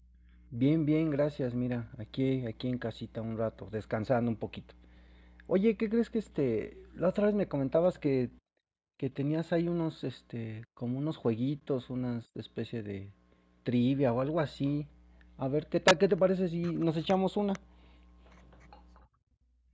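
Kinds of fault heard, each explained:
Integer overflow: from 15.88 to 15.91 s a loud speech peak went about 3 dB past the largest value the integer format holds and wrapped to the opposite sign instead of being limited, giving a violent crack far sharper than clipping. On the waveform, peaks jump from one extreme straight to the opposite extreme. On a spectrogram, a bright vertical stripe of broadband energy cuts across call audio that has nothing above 8 kHz.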